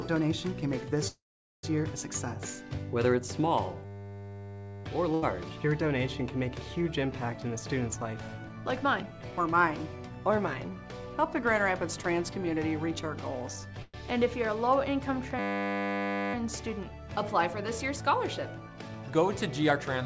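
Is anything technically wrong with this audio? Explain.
Yes. There are four kinds of fault, on audio that is band-limited to about 8 kHz. That limit fits a wideband call codec such as G.722 at 64 kbps.

Call audio freeze, 1.08 to 1.65 s and 13.82 to 13.96 s. The sound stalls and then picks up exactly where it stopped. The first stall is 0.55 s long, and about 0.43 s of it is silence after a brief fading continuation. The second is 0.11 s, with only about 20 ms of silence. The likely cause is packets held up in transit so that the jitter buffer ran dry. Unlike packet loss, nothing is missing. A gap is inserted instead, pushing everything after it later.

System hang loop, 3.85 to 4.84 s and 15.39 to 16.34 s. Each time, a single 10 ms slice of audio repeats exactly, nearly a hundred times. This produces a hard, steady 100 Hz buzz lasting about a second. It happens when the machine or driver freezes while the sound hardware keeps replaying the same short ring buffer. 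It differs from concealment buzz because it doesn't fade. The same fragment recurs identically at a fixed rate, and the audio then resumes with nothing lost.

Burst of packet loss, 5.14 to 5.24 s. About 80 ms of audio never arrived. The receiver filled the hole by extending the last sound and fading it down over roughly 78 ms. The audio then jumps ahead, so the material that belonged in that stretch is gone. This is the reverse of the freezes: the timing stays the same, but content is missing, and the fill dies away rather than looping.

Jitter buffer speed-up, 7.33 to 9.62 s and 18.60 to 19.85 s. The receiver had buffered more audio than it wanted. To catch up, it repeatedly cut out short pitch-period pieces. The first stretch runs about 10% fast and drops roughly 0.2 s. The second runs about 7% fast and drops about 0.1 s. The pitch stays put while the pace hurries, which distinguishes this from a simple playback-rate change.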